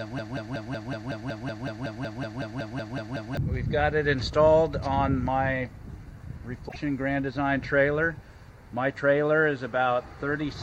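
Right from the start the clip is already caught in a broken-record loop: a 186 ms fragment repeats back to back, about 17 times, until roughly 3.37 s. It's most likely a stalled player or stream resending the last chunk it held, so the audio meant for those seconds is simply gone.

Then at 6.68 s there's a brief glitch lasting about 80 ms, and the audio jumps ahead. That's a broken MP3 bit reservoir, likely from frames being dropped, with the 26.1 ms frame length fitting MP3. The frames after the cut reached back for borrowed data and decoded someone else's bytes.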